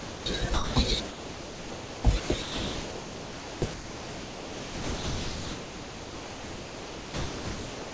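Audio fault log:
0.00–0.26 s, 0.54–0.76 s, 1.08–2.04 s, 2.20–2.30 s, 2.42–3.62 s and 3.74 s to the end: sound dropped by the voice detector. The speech repeatedly gives way to steady, featureless noise, in gaps from 0.1 s to over 4 s, with the last one running to the end of the clip. This is likely a sender-side voice detector treating speech as background and stopping transmission, so the receiver fills each gap with comfort noise until the detector triggers again. The call path's G.722 coding stops at 8 kHz.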